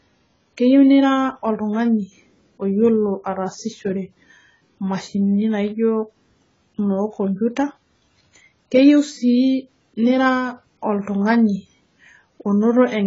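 From start to finish the speech has that heavy AAC compression sound, most likely an AAC-LC encode at a bitrate that fits about 16 kbps. There's nothing above 7.6 kHz, so the top end is just gone and everything sounds dull. With so few bits per frame the encoder throws away or smears whole chunks of the spectrum, which leaves the sibilants fizzy and gives sustained sounds a watery warble.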